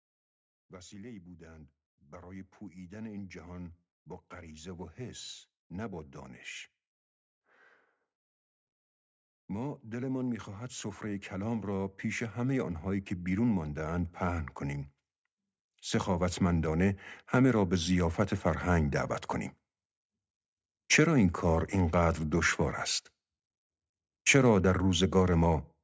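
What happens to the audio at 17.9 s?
At 17.9 s the level is mid-swell in an automatic gain rising from 16.05 to 19.17 s: the gain control lifts speech and background together by about 4 dB, so the waveform envelope widens gradually and the spectrogram brightens evenly.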